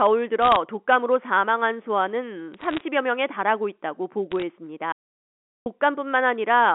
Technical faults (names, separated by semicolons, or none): bit errors on a digital phone line; audio dropout to silence